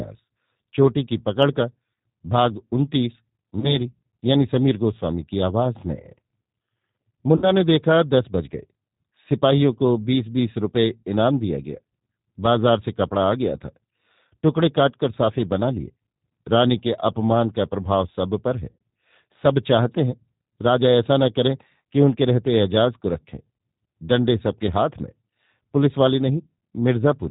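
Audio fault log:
Throughout, G.729 codec: the speech passes through an 8 kbit/s G.729 coder that rebuilds each 10 ms frame from a vocal tract filter, a pitch predictor and a few pulses. Everything above 4 kHz is gone, and the voice sounds plainly rough, muffled and faintly synthetic.
3.60–3.77 s, 7.36–7.53 s and 18.71–18.80 s, VoIP packet loss concealed by the speech codec: audio goes missing, about 20, 60 and 100 ms in turn, which fits one, three and five lost packets. The decoder extends its last pitch and filter at falling gain, so the speech smears into a fading buzzy tone or coloured noise and stays weak briefly afterwards.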